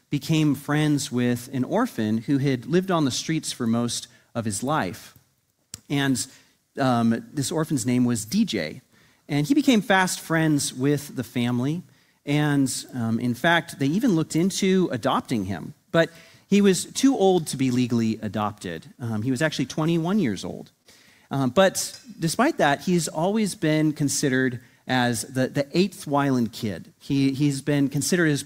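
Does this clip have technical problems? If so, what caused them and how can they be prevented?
Yes. A short stall from a late packet occurs at 19.91–19.94 s and again at 20.82–20.87 s. Each time a packet arrived late, the jitter buffer ran dry, and the last sound was stretched for about 18 ms and then 24 ms before playback resumed where it stopped. A deeper or adaptive jitter buffer on a steadier network connection would prevent this.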